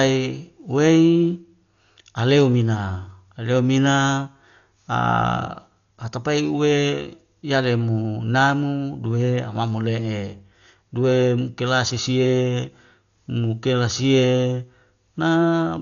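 Right from the start and for the whole length, the speech sounds heavily coded, and the likely cause is Dolby Digital compression squeezed to a very low rate, something in the region of 48 kbps. Nothing survives above about 6.9 kHz, so it comes across dull and boxed-in. The encoder has starved many frequency lines of bits, and the decoder fills those gaps with dither noise, which you hear as a rough, fluttery hash clinging to the voiced sounds.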